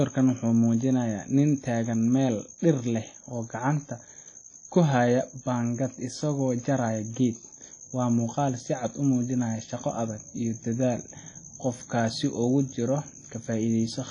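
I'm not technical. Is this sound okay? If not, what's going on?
No, it isn't. All the way through, the speech has a washy, ringing quality and a hiss that rises and falls with the voice, and nothing reaches above 10 kHz, so it sounds dull at the top. This is likely WMA compression, squeezed hard. Unlike simple muffling from a filter, the damage here smears each sound in time and swirls along with it, rather than just dulling it cleanly.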